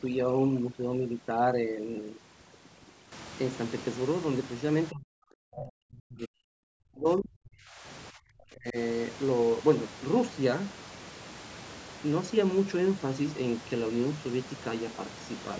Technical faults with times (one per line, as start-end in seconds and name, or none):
0.00-3.12 overdone noise removal
4.90-7.85 speech suppressed in double talk
8.11-8.77 speech suppressed in double talk